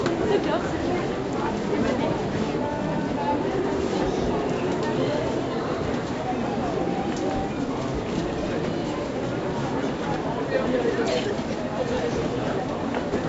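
No technical faults can be heard anywhere in this recording.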